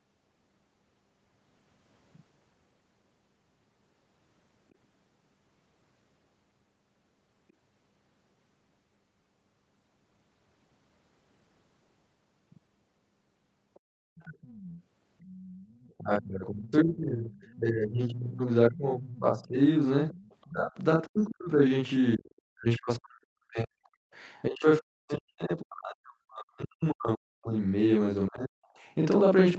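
Throughout, the speech sounds doubled, with a second copy at equal level trailing by about 43 ms. This is channel delay (doubling): one channel ran late by a long buffer, which fits 2048 samples, and both were summed to mono.

From 13.74 to 15.94 s a faint second voice sits about 25 dB under the speech, returning at 17.39 to 17.56 s even fainter, around 35 dB down, and at 20.11 to 20.49 s at about 25 dB down. This is the other side's voice leaking through, likely loudspeaker playback that the echo canceller left in the microphone signal.

The talker's speech then dips and breaks up in pieces from 15.98 to 19.6 s, 20.5 to 21.5 s, 22.16 to 27.55 s and 28.28 to 28.6 s, falling roughly 25 to 40 dB at its deepest. This is speech suppressed in double talk, likely the echo canceller turning everything down while both sides spoke at once.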